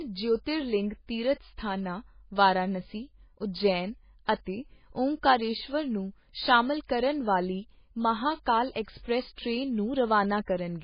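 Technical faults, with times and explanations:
Throughout, MP3 compression: nothing sounds above 5.1 kHz, and the speech has a heavy watery, swirling quality as weak frequency lines flicker on and off between frames. The likely cause is a very low-bitrate MP3 encode, around 16 kbps. A plain low-pass filter would dull the top without that swirl.
4.25–4.28 s, 6.87–6.89 s and 8.72–8.76 s, pre-echo: a hiss of 31, 25 and 40 ms comes just before a sharp attack and softens it, because the codec noise sized for the loud onset spreads through the whole block. Unlike reverb or echo, it precedes the sound rather than trailing it.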